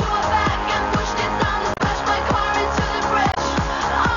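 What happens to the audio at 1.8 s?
From 1.74 to 1.81 s there is damaged data in the compressed stream. The decoder misreads the corrupted frames and loses sync, giving a brief chirp, squawk, click or short hole. On a spectrogram it shows as a narrow vertical disturbance; the waveform breaks abruptly there.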